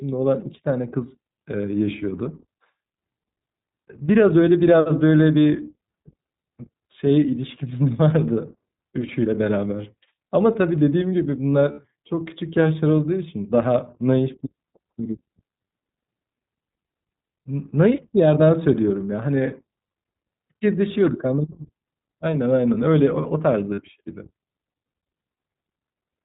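Throughout the recording the speech carries the signature of the iLBC codec. Nothing above 4 kHz survives, so sibilants and consonant detail are dulled, and the voice has a slightly rough, synthetic grain that is plainly audible. This comes from a narrowband coder modelling each short frame's excitation independently. The texture is consistent with the 15.2 kbps mode using 20 ms frames.

Two dropouts show the behaviour of lost iLBC frames. From 11.72 to 11.79 s, about 60 ms of signal is replaced. That fits three missing 20 ms frames. The decoder conceals the gap by repeating the last pitch cycle with added noise, so it comes across as a brief held, faintly buzzy vowel rather than silence. A shorter instance at 23.74 to 23.80 s covers about 40 ms, roughly two frames. In both cases the speech snaps back cleanly right after, because each iLBC frame decodes without depending on the previous one.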